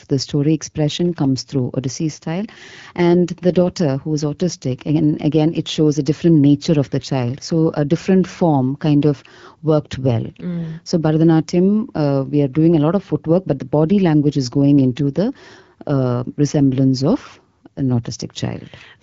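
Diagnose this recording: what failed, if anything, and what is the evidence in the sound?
Nothing failed in this speech recording: it comes through an AMR wideband (HD Voice) link at a rate that fits 12.65 kbit/s, with only the light, even coding texture expected there and no dropouts, distortion or level faults at any point.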